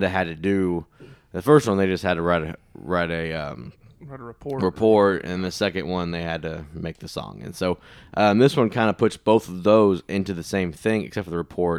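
A listener hears a speech recording whose signal holds steady throughout, with nothing technically wrong to point to at any moment.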